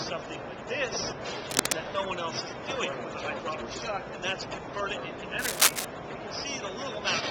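At 1.50 s there's a burst of cable scratch noise lasting until 1.74 s, a dense, ragged rustle sitting a little above the sound itself. It comes back at 5.39 s and runs to 5.85 s, longer and clearly louder this time. The likely cause is a worn lead or connector being moved, so its contact resistance flickers and injects those uneven crackly bursts straight into the signal.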